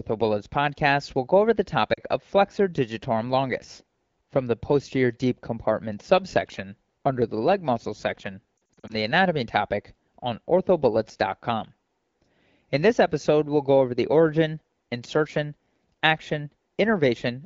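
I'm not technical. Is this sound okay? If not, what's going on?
No. There are lost AMR speech frames at 1.94 s, just after "will go over the", and again from 8.58 to 8.93 s, after "the leg muscle section". On a phone call, radio errors corrupted small chunks of speech, so the decoder guessed each gap by stretching and fading the last good sound. The first gap is about 40 ms, heard as a brief dip or warble. The second scatters short dropouts across about a third of a second, making the sound flutter before "the anatomy topic on".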